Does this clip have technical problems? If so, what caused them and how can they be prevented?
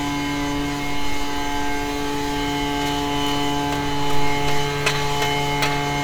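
No, no technical faults heard.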